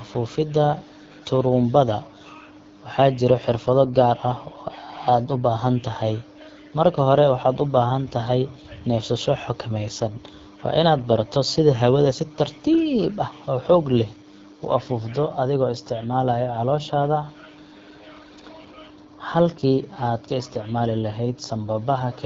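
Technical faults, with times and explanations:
Throughout, AMR wideband (HD Voice) codec: the speech is plainly rough and raspy from a coarse pulse-driven vocal tract model, which fits the low 8.85 kbit/s mode.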